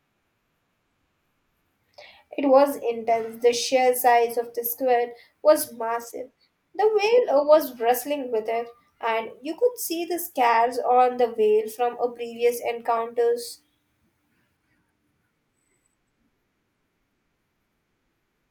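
Just after "size of the squid", from 5.61 to 7.11 s, a grainy hiss rides on the speech, strongest on loud and bright sounds and gone in the gaps. This is sample clock jitter: timing wobble of a couple of microseconds leaves error noise roughly 35 dB below the signal.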